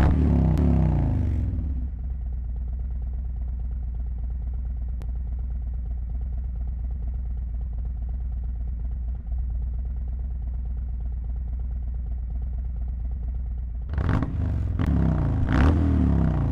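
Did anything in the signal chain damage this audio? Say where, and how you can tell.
Yes. CD skips during playback at 0.57, 5.01 and 14.85 s: the laser jumped tracks, leaving a brief waveform gap, a vertical spectrogram tick, and audio resuming elsewhere.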